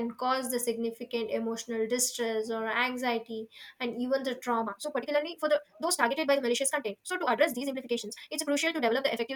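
Speech, with a time-stretched section from 4.60 s to the end at 9.35 s: the pace jumps to about 1.88 times faster while pitch holds, sounding rushed, likely from pitch-preserving software dropping short pieces. Spectrograms show unchanged harmonic spacing but compressed syllables; waveforms show denser, abruptly spliced segments.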